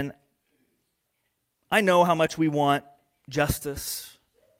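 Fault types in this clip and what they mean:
No audible faults detected.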